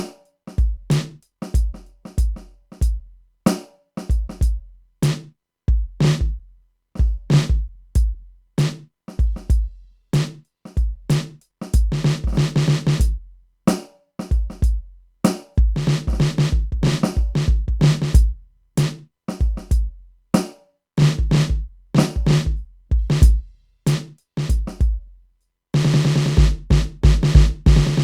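From 0.12 s to 28.03 s the music carries a soft rattle of clock slip clicks, a tick every 20 ms or so, likely from two unsynced clocks drifting about a thousand ppm apart.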